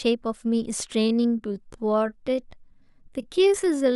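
At 1.0 s the speech slows abruptly, and it stays slow to the end at 3.96 s. This is a time-stretched section. The pace drops to about 0.69 times normal speed, yet the pitch does not fall. The likely cause is software stretching the audio to fill a set length. It would have kept the pitch by repeating short pieces of the sound. Those repeats make the slowed speech drag.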